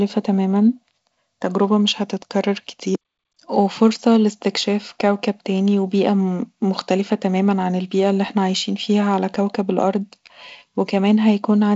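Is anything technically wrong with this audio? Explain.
No, nothing is technically wrong with this audio.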